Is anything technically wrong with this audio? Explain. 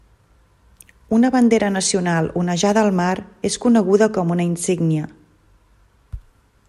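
No, nothing here sounds technically wrong, so there's nothing in this speech recording to flag or explain.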